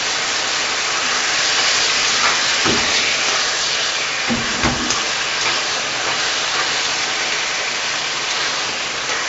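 From start to finish, a gritty hiss rides on every loud moment and sharp attacks break up, with nothing above 7.7 kHz. This is heavy 4-bit ADPCM compression: coarse steps from a prediction trail fast changes, at a rate that fits 64 kbps.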